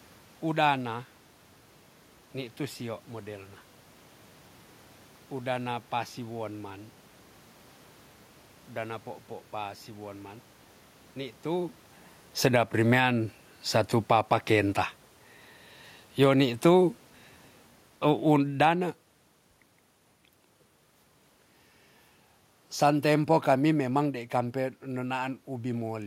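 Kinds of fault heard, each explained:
Automatic gain falling: the gain control decides things are too loud and backs off, so level and background sink together, by about 4, 9 and 6 dB.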